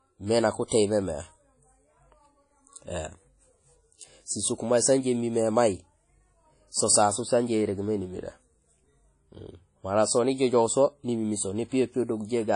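From the start, the whole recording has a ringing, washy quality. A hiss rises and falls with the sound. Nothing is heard above about 10.1 kHz. This is likely WMA compression. A transform codec like this one codes the signal in long blocks. Its quantisation noise spreads across each block, and weak detail is zeroed. The damage is plainly audible, which fits a low bitrate of around 32 kbps.

Just after "mé nak", from 0.68 to 0.71 s, comes pre-echo. A brief hiss arrives about 39 ms ahead of a sharp attack. The attack itself sounds softened and smeared. It fell late in a coding block. The noise sized for that loud onset was spread over the whole block, so it also filled the quiet moment before it.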